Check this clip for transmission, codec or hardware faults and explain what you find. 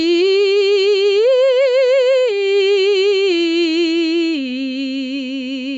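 One fault stands out: gain pumping, running through the whole music clip. The level keeps breathing. Every loud moment gets pulled down, with a swing of roughly 10 dB. The likely cause is input gain set far too high for the microphone, with a fast limiter or compressor clamping down on each peak and then releasing. That squeezes loud and soft passages toward the same level, so the music sounds flattened and restless. The top end stops at around 8 kHz, which fits the call's bandwidth rather than a fault.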